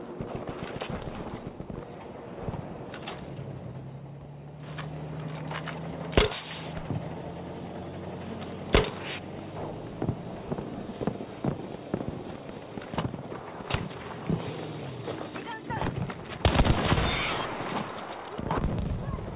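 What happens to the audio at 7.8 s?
Nothing goes wrong at 7.8 s: the audio runs on intact there, carrying only the narrowband, telephone-style character of the call path, with nothing above 4 kHz.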